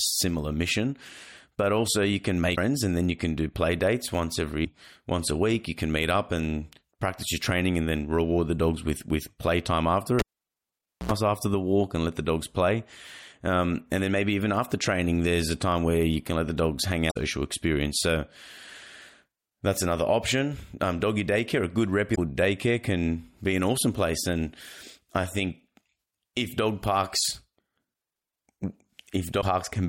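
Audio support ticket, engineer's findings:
Damaged data in a compressed stream at 2.52–2.58 s (between "also you can" and "and then you can"), 4.64–4.67 s, 17.07–17.17 s (after "let the dogs hang"), 22.11–22.18 s and 29.38–29.43 s. Short glitches. Corrupt frames; the decoder loses sync and resyncs at the next header.

Cable pulled and plugged in at 10.19–11.12 s, after "with with playtime after", resuming at "after the walk and". Pop, then about 875 ms of near silence, an 81 ms burst of 60 Hz mains buzz as the tip touches first, and a second pop on reconnection. Physical connector on a live line.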